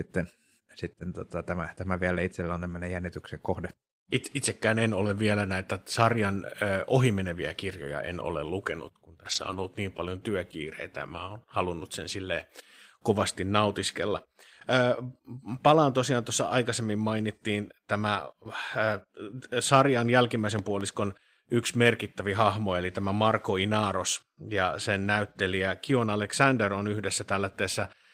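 A speech recording with two technical faults. From 9.31 to 9.65 s, between "en ole lukenut kun" and "niin paljon työkiireitä", lost packets were rebuilt from error correction. About 180 ms sounds rougher and noisier but never drops out, because low-bitrate copies filled the gaps. At 20.59 to 20.83 s there is a loud pop, heard as two sharp pops a few decibels above the speech. The cause is likely an electrical step or pulse, such as a switch or static.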